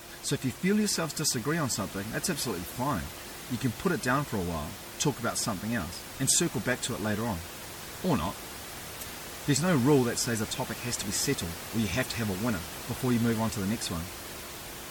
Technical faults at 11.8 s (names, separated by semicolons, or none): MP3 compression